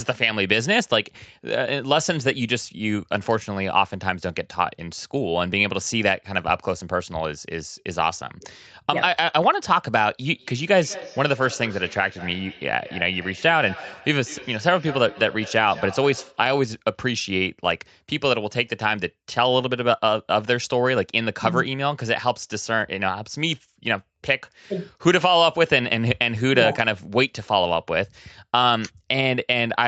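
From 10.32 to 16.52 s, feedback echo between two devices returns the speech at a fixed interval of roughly a fifth of a second, about 16 dB down, as distinct thinned copies rather than smooth reverb.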